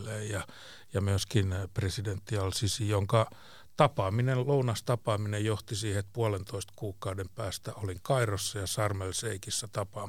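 Nothing in the recording stood out as a technical fault on listening.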